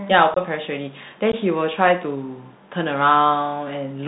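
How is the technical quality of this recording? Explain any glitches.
The technical quality is poor. The speech has the narrow, gritty sound of a Bluetooth headset link, and it breaks up twice.

The Bluetooth CVSD headset codec colours the whole recording. CVSD sends one bit per sample, saying only up or down, while its step size adapts. The plainly audible damage fits a 64 kbps CVSD stream. Nothing above 4 kHz gets through, so the speech sounds muffled. Loud, bright sounds outrun the step and distort. S sounds turn scratchy, and a grainy hiss sits underneath.

Unconcealed Bluetooth headset packet loss strikes at 0.34 to 0.38 s and again at 1.32 to 1.34 s. Short voice packets between headset and phone went missing, and nothing was filled in to hide the gaps. The first hole is about 22 ms long, roughly a few packets. The second is 15 ms, about a couple of packets. Each gap has hard edges that can click. 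The speech then returns briefly quieter.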